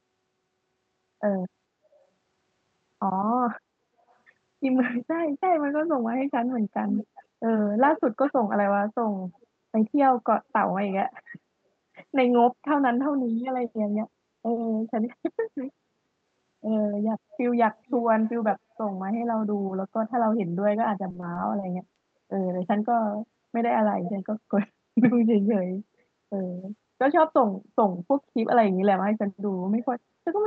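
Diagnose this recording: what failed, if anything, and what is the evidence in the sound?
Echo leak, at the call-processing stage. You can hear a delayed copy of the speech coming back at 4.09–4.16, 6.58–7.24, 7.87–8.32, 9.34–9.47, 10.89–10.94, 17.75–18.77 and 24.04–24.19 s. It trails by about 0.4 to 0.46 s. Most of it is faint, but around 6.6 to 8.3 s it's only about 10 dB under the speech. The likely cause is a far-end speakerphone whose echo canceller let some of its own playback back into the mic.

Repeated packet loss (robotic sound), on the network side. From 21.09 to 22.05 s the speech goes choppy, with small pieces dropping out. That pattern fits around seven short losses in under a second, none longer than about 20 ms. The jitter buffer patched each hole by stretching the last bit of sound, which covers roughly an eighth of that stretch.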